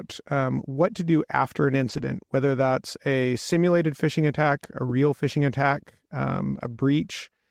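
Lost packet rebuilt from error correction, from 1.89 to 2.07 s: packets went missing, and the decoder filled the roughly 100 ms with low-bitrate copies carried in the following packets. There is no gap, but that stretch sounds rougher and noisier, which fits five separate 20 ms frames.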